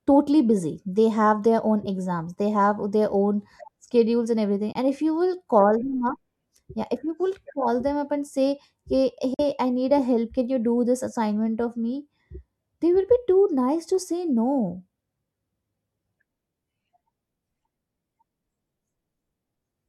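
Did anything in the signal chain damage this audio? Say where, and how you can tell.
Yes. Bluetooth dropouts at the playback link cut the sound after "own schedules and everything" (4.72 s, 23 ms) and "up and say hey" (9.34 s, 46 ms). The likely cause is late packets being discarded.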